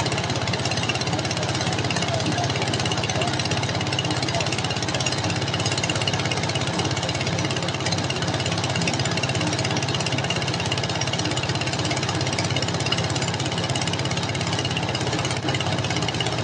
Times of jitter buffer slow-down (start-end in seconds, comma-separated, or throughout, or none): none